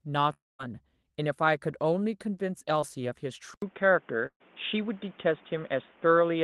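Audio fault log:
0.33–0.61 s, long network dropout: likely a network outage; about 0.26 s never arrived, the last sound continues briefly then falls to silence before audio resumes.
2.81 s, short concealed packet loss: about 20 ms missed the decoder, so the receiver stretched the preceding sound across the hole, leaving a brief smear.
3.54 s onward, input switched to a poorer device: the input likely changed mid-recording, giving an 80 ms silence, then a duller sound with nothing above 3.6 kHz, level shifted about 5 dB, plus new background noise.
4.26–4.42 s, burst of packet loss: about 140 ms was lost in a run, so the last sound was held and faded out, briefly silent, before audio picks up further on.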